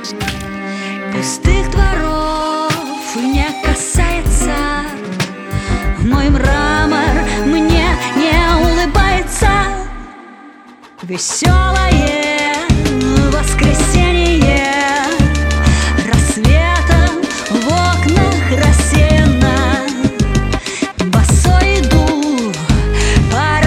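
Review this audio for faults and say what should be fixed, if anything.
No faults found; nothing needs fixing.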